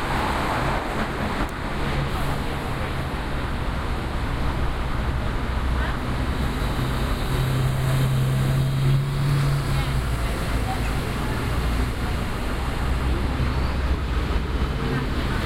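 A regular click recurs every 2.05 s from 1.12 s to 15.43 s, roughly seven in all. These are clock drift buffer slips, likely from two devices whose clocks differ by around 500 ppm, so the buffer drops or repeats about 50 samples at each slip.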